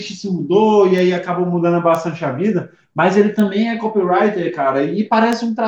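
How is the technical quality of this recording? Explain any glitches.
The recording has four isolated bit error spikes, at 0.98, 1.95, 3.40 and 5.33 s, each a single sharp tick. A flipped bit throws one to three samples (three at 5.33 s) up to about -12 or -6 dBFS before snapping back. Unlike a splice click, the surrounding waveform continues undisturbed.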